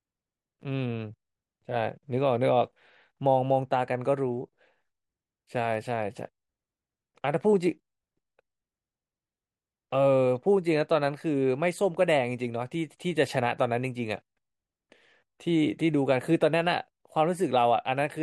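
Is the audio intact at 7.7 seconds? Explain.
Yes, the speech at 7.7 seconds plays through intact, with no audible fault at that point.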